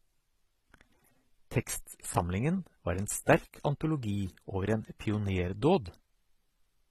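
A speech clip whose top end stops dead at 14.8 kHz for its whole length, with two different kinds of coding damage layered together, the artefacts of each codec heard at once. That mix points to a likely case of transcoding between lossy codecs, with an AAC-style encode followed by a lower-rate pass using spectral band replication. On a spectrogram the energy ends at a flat ceiling, and the band beneath it looks blocky and patchy.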